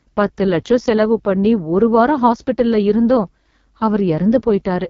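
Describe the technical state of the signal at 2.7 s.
At 2.7 s you're hearing the AMR wideband (HD Voice) codec, present throughout. Heavy low-rate coding, which fits the 6.6 kbit/s mode, makes the speech rough and raspy, with nothing above 7.3 kHz.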